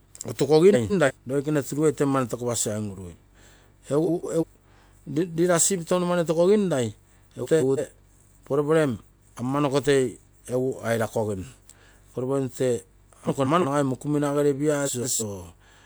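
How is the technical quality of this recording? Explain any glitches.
The speech is disturbed five times by brief garbled flutters, from frames out of order at 0.73–1.11 s, 4.06–4.44 s, 7.43–7.80 s, 13.27–13.65 s (just before "mokumina gere") and 14.85–15.23 s (just after "mokumina gere"). In each, two adjacent blocks of about 170 ms, which fits runs of four frames, arrived and were decoded swapped, so the halves play in exchanged order, but no time is lost.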